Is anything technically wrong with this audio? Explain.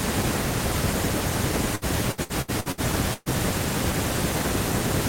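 Yes. Repeated packet loss (robotic sound) runs from 1.75 s to 3.29 s. Over that stretch the stream keeps dropping or delaying chunks of audio, and each hole is papered over by extending the last bit of speech that arrived. About seven such breaks occur, the longest roughly 0.12 s, so nearly a third of the span, close to half a second in total, is stand-in sound. The speech comes out choppy, with pieces missing.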